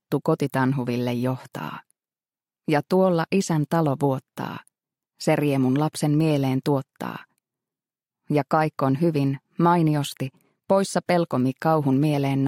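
Nothing in the audio points to a technical fault of any kind, so there's nothing here that needs fixing.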